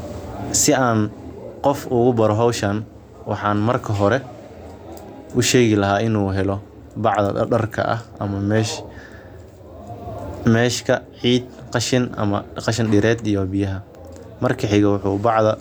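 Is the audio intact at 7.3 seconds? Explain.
Yes, the speech at 7.3 seconds plays through cleanly, with no dropout, click, distortion or other fault at that moment.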